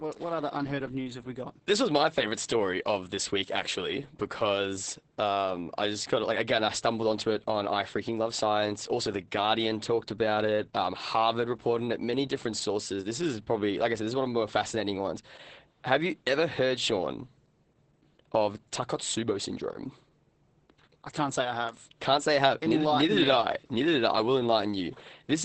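Throughout the speech, Opus voice compression is at work in its SILK linear-prediction mode. The sound is cut off near 8.7 kHz, giving a wideband but muffled quality, and the heavy coarse coding of the excitation makes the voice hoarse and faintly robotic, which fits a bitrate of around 10 kbps. Unlike a plain low-pass filter, the damage lies in the buzzy, synthetic texture of the voice itself, not just the missing treble.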